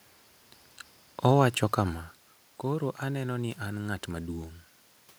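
Speech, with no technical faults to report.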